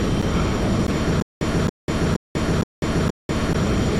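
From 1.22 s to 3.41 s the audio falls into a stutter with silent gaps. A fragment about 280 ms long plays, then cuts to dead digital silence for about 190 ms. The same fragment returns four times, at a steady period of 470 ms. The rhythm is mechanical and even. The likely cause is a stalled player or stream that replays its last buffered fragment on each retry and then runs dry. Whatever should have sounded during that span is missing.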